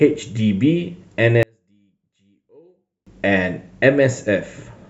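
From 1.43 to 3.07 s the speech nearly vanishes in mono, about 38 dB down, likely from one channel inverted; the waveform collapses to a thin trace.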